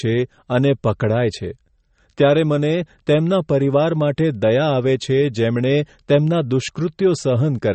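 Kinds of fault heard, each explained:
MP3 compression: Throughout the speech, nothing reaches above 8.3 kHz, and the compression damage is plainly audible as a watery, swirling texture, with s sounds turning metallic and chirpy and consonant onsets smeared. This is likely a heavily starved MP3 encode, pointing to a low bitrate in the region of 34 kbps. On a spectrogram the energy stops at a flat ceiling at 8.3 kHz, and the upper bands break into flickering patches that blink on and off from frame to frame.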